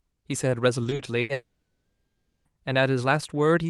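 From 0.83 to 1.31 s the speech turns choppy and robotic, with small pieces missing and brief buzzy stretches holding the last sound. This is repeated packet loss: four holes in under half a second, the longest about 80 ms, together about a third of that span. Each one was papered over by extending the preceding audio, and the next gap arrived before the sound could settle.

Straight after, from 1.33 to 2.47 s, the speech stops entirely. A short fading buzz carries the last sound forward, then roughly the final 0.84 s of the stretch is near silence before the speech resumes with the intervening part simply gone. The likely cause is a long network dropout: for over a second nothing reached the receiver, so concealment ran out and that audio was never played. The call path itself, an Opus codec whose output stops around 12 kHz, contributes only its ordinary coding character.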